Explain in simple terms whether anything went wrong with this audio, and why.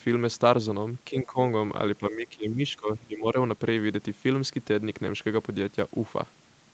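The speech twice sinks in level, from 1.1 to 1.38 s and, longer and deeper, from 1.99 to 3.36 s, with only about 1.2 seconds of sound affected in all. This is likely speech suppressed in double talk: the call's echo canceller, hearing both ends at once, turned down the talker along with the echo. It differs from a network dropout because the voice fades in patches instead of vanishing in clean, silent gaps.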